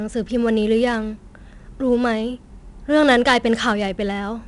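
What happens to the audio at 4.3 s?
4-bit ADPCM compression colours the speech at 4.3 s, as it does across the whole clip. Each sample is coded as a coarse 4-bit step from a prediction, leaving gritty hiss that follows the loud sounds, while nothing above 10.7 kHz points to a sample rate near 22 kHz.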